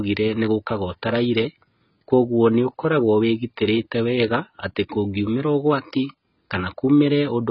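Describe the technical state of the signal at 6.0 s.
AAC compression at 6.0 s, present throughout: nothing above 5.6 kHz, with smeared, fizzy sibilants, likely from heavy AAC-LC quantisation at a very low bitrate around 16 kbps.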